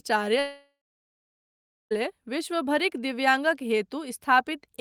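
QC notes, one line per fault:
0.39–1.93 s, long network dropout: the speech breaks off into a buzzy, fading continuation of the last sound that dies away after about a third of a second, leaving roughly 1.2 s of silence before speech resumes at "विश्वभरिक दिव्याङ्गक". This is likely a stretch of packets that never arrived. The receiver extrapolated the final fragment, then gave up and filled the gap with silence, so about 1.5 s of the original speech is gone rather than delayed.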